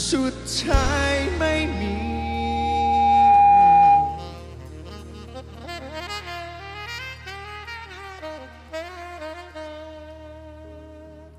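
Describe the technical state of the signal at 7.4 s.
At 7.4 s the signal is intact, with no audible fault at that moment.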